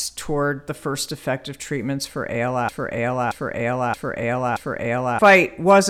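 Speech clip in which playback likely stalled at 2.69 s, just after "first effective treatments for", producing a broken-record loop: one 0.63 s fragment repeats four times until 5.19 s, replacing the intended audio.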